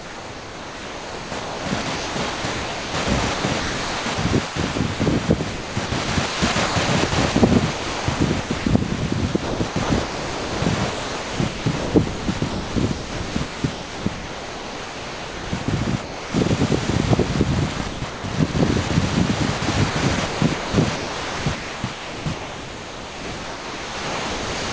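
From 0.0 to 16.34 s the sound is chopped by what is likely the sender's voice detector gating on and off. About 9.6 s of that stretch is replaced with comfort noise, so the audio keeps breaking into a synthetic hiss.

At 16.86 s there is a single 20 ms dropout, likely the voice detector briefly classing the sound as background and stopping transmission. The receiver plays a short patch of comfort noise in its place, heard as a tiny gap before the sound resumes.

From 17.78 to 18.90 s the chopping returns, with about 360 ms swapped for comfort noise. From 19.58 s to the end it resumes, with about 4.0 s replaced. Both stretches have the same choppy texture, likely from the same detector switching.

Throughout, the G.722 call path limits the band to below 8 kHz.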